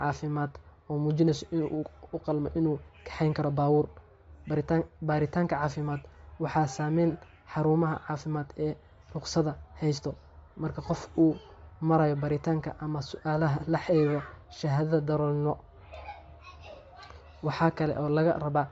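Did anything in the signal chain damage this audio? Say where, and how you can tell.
Yes, at the codec stage. Throughout, the speech has a breathy, grainy edge and nothing above 7.7 kHz, likely Bluetooth LC3 compression at a low bitrate near 32 kbps. A spectrogram shows a hard ceiling at 7.7 kHz, with blotchy, noise-filled upper bands where the encoder substituted noise for discarded detail.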